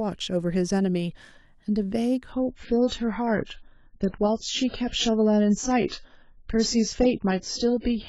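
A speech clip that drops to a lower-bitrate adaptive stream from 2.32 s to the end, where the treble vanishes above 7.7 kHz with no gap. On a spectrogram the upper band ends abruptly there.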